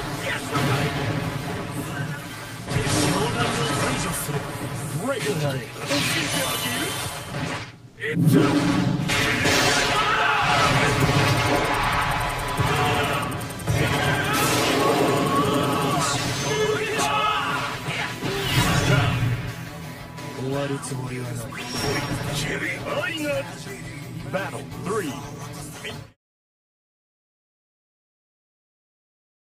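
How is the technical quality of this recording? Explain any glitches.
One glitch stands out, a brief comfort-noise patch at 7.89 to 7.97 s. For those 80 ms the real background drops out and is replaced by a flat, featureless hiss about 8 dB quieter, so the ambience seems to thin for an instant before the genuine texture returns. The likely cause is discontinuous transmission: the sending codec judged the moment silent, stopped transmitting, and the receiver filled the gap with synthetic noise roughly matched to the background. The clip ends with a smooth fade out from roughly 25.5 s to 26.17 s.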